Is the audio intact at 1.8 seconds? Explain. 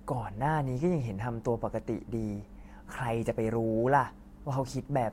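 Yes, the speech plays through 1.8 seconds with no dropout, click, distortion or other fault at that point.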